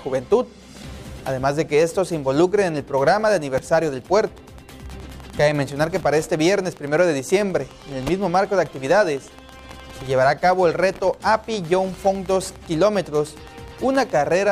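From 4.07 to 14.42 s a train of clicks ticks at a steady 9.7 per second, likely from interference. The similar, evenly spaced pulses distinguish it from random crackle.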